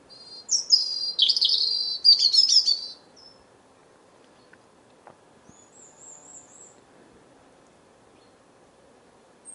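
Nothing stood out as a technical fault on listening to this recording of everyday sounds.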